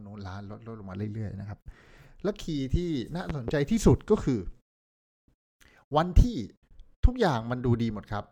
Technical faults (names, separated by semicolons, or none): loud pop